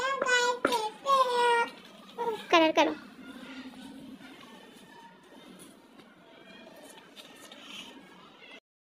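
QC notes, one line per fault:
No faults found.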